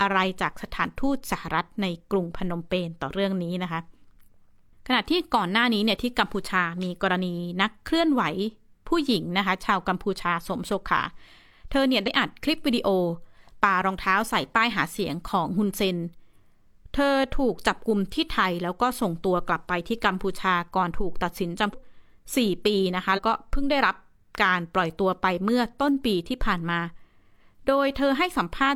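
At 12.03, 21.69 and 23.13 s compressed frames are skipped. The speech jumps ahead by roughly one, three and two 46.4 ms frames.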